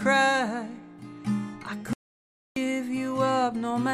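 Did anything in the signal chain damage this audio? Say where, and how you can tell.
Yes: an audio dropout to silence runs from 1.93 s to 2.56 s, removing about 630 ms of material. The sound stops abruptly and resumes just as abruptly, and the gap is silent with no room tone or noise floor underneath, so the input stopped delivering samples while the recorder kept writing silence. That points to the capture side, likely a momentary loss of the input device or its link, rather than a problem in later processing.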